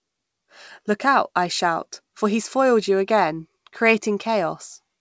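Speech carried over a WebRTC call path, with the band ending at 8 kHz as a G.722 wideband codec leaves it, and no technical fault can be heard anywhere in the recording.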